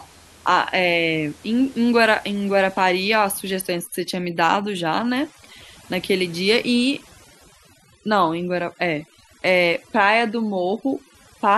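From 2.32 s to the end, overdone noise removal sets in. Bands near the noise estimate are cut away. The background twinkles.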